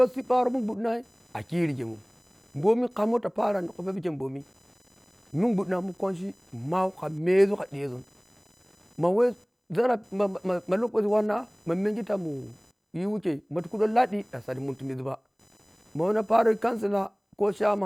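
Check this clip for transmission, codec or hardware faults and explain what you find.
One hardware fault runs through the whole speech clip. Computer activity noise sits about 30 dB below the speech. Processor or mouse load disturbs the shared ground, giving a buzzing chirp around 1 kHz that ignores the speech.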